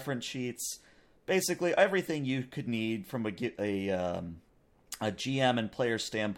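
Nothing stands out here as a technical fault; the speech comes across without any glitch or interruption worth pointing to.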